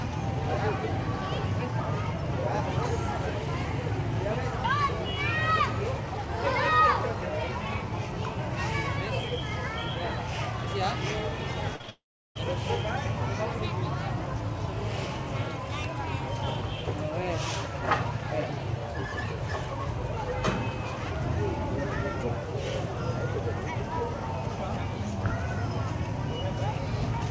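The audio runs through a call path whose band stops at 8 kHz, consistent with G.722 at 64 kbps, and around 11.8 s it breaks up in three stages. First comes short concealed packet loss at 11.76 to 11.81 s: about 40 ms of data missed the decoder, so the receiver extended the preceding sound for roughly 35 ms before handing over, leaving a brief smeared wobble. Immediately after, a burst of packet loss from 11.81 to 11.90 s drops about 60 ms more; here the concealment stretches the last sound for around 64 ms while turning it down, heard as a held, fading buzz or hiss. From 11.90 to 12.37 s the sound trails off into a fading continuation and then roughly 370 ms of silence before resuming further on, with about 460 ms of material gone, most likely a long network dropout in which nothing arrived at all.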